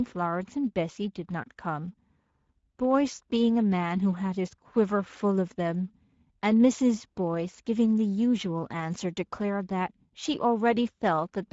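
Speech passed through the Speex codec for its whole length, at a quality that points to roughly 16.8 kbps. With too few bits to code the excitation faithfully, the CELP coder leaves plainly audible damage: the voice sounds grainy, hoarse and noisy throughout.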